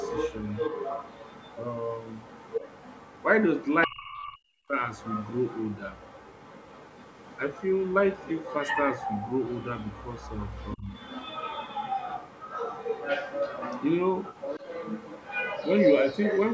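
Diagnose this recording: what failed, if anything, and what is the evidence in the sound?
Video or display buzz, analogue wiring: a constant 50 Hz field-rate buzz with hash above it, about 25 dB below the speech. A 15.6 kHz line-rate tone distinguishes it from plain mains hum.

Other side's voice leaking through, call processing: a second, quieter voice sits about 10 to 15 dB under the speech from 0 to 3.24 s, 3.55 to 4.38 s and 4.95 to 16.44 s. The likely cause is an echo canceller leaving the loudspeaker's sound in the microphone.

Speech suppressed in double talk, call processing: the speech drops by up to about 40 dB from 3.86 to 4.75 s, and briefly by about 20 dB at 10.76 to 10.88 s. Both dips coincide with the leaking voice, so the likely cause is the canceller ducking during overlap rather than a network dropout.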